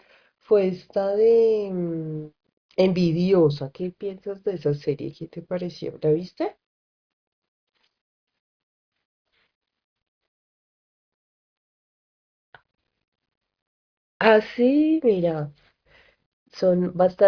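No technical faults are audible anywhere in the speech recording.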